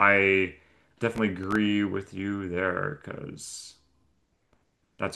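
From 1.16 s to 1.56 s there's a burst of processor overload crackle riding on the speech. The processor couldn't finish its tiny buffers in time, and each missed deadline got filled with a sliver of old audio with hard edges. The sound points to very short buffers, around a millisecond and a half, with a handful missed across that stretch. You hear it as gritty tearing that stops once the load eases.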